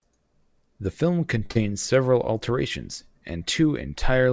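At 1.46 s the speech hits a short stall from a late packet. A packet arrived after it was due, the jitter buffer ran dry, and the receiver held the last sound for about 30 ms before resuming from the same point. Nothing is lost, but playback now runs about 30 ms later. It sounds like a sound stretched a little too long, with a faint buzz or dip. Unlike packet loss, the speech picks up exactly where it paused.

Right after, from 1.51 to 1.57 s, comes a short concealed packet loss. Here 40 ms of audio never reached the decoder in time, and the receiver covered the gap with 41 ms of synthesized continuation, extending the pitch of voiced sound or filling unvoiced sound with shaped noise, then blending back. The result is a brief smear or wobble where real content is gone. Unlike the stall, the speech does not resume from where it stopped. That missing stretch separates it from the delay before it, and both faults sit within the G.722 call path's band, which has nothing above 8 kHz.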